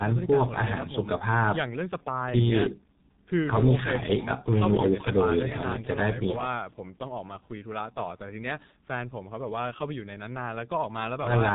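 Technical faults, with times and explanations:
Throughout, G.723.1 codec: the speech comes across heavily damaged, muffled and hoarse, with consonants smeared together, and the damage level fits the 6.3 kbit/s mode. The codec chops the signal into 30 ms frames and rebuilds it from a coarse vocal model that updates slowly, so fast transitions blur. It also drops everything above 4 kHz, which is where the crispness of speech lives. Trimming the deepest bass is just the call's microphone processing doing its normal job.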